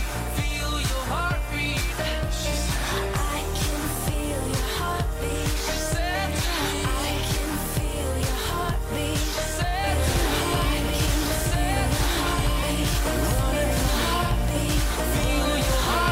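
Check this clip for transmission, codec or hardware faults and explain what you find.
There's one fault here, a doubled audio track. From 9.87 s to the end, a second copy of the audio sits on top of the original, trailing it by roughly two seconds at about the same level. It cuts in abruptly and carries no decay or room colour, so it reads as a plain repeat, not an echo. The likely cause is the same signal arriving again through a slower capture path, or an edit that left two copies out of step.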